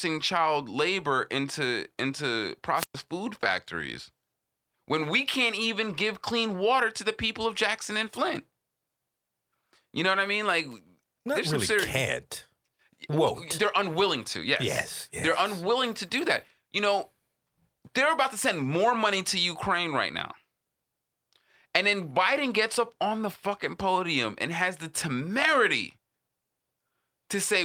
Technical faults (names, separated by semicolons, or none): wireless microphone squelch dropout